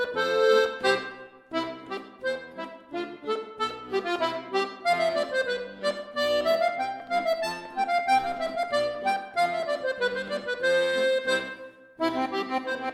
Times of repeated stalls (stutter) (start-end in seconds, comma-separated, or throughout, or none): none